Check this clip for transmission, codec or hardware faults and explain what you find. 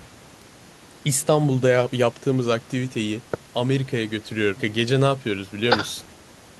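There is one fault in this speech clip, a bit error spike at 0.42 s. A single flipped bit in memory or on a digital link threw what sounds like one sample off by a power of two before it snapped straight back. The result is one sharp, broadband tick with no relation to the speech around it.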